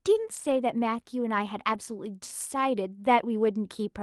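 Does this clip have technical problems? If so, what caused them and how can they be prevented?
Yes. Between 0.35 and 0.57 s, and again from 1.73 to 1.75 s, there are stretches of lost packets rebuilt from error correction. Each lost packet was replaced by the low-bitrate copy carried in the next one, so the audio sounds grainier and noisier for about 120 ms in the first stretch and 20 ms in the second, but it never drops out. That absence of any gap is what distinguishes this from plain packet-loss concealment, which smears or repeats the audio. To prevent it, reduce network packet loss.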